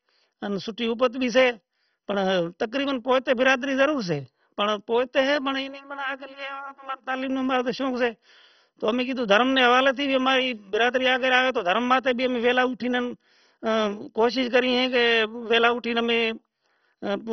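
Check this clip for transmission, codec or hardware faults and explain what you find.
One fault runs through the whole speech clip: MP2 compression. The speech sounds dull and muffled, with nothing above about 6.1 kHz, and carries a gurgling, granular roughness that sounds heavy. The likely cause is MPEG Layer II coding starved of bits, which fits a rate around 32 kbps. The coder divides the signal into 32 sub-bands, cannot afford the upper ones and shuts them off, while the surviving bands are quantised so coarsely that they churn.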